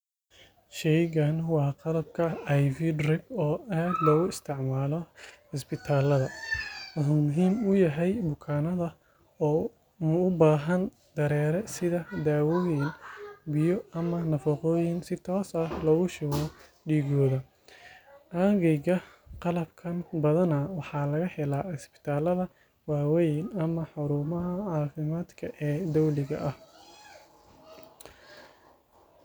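No technical faults can be heard anywhere in this speech recording, and the signal holds steady throughout.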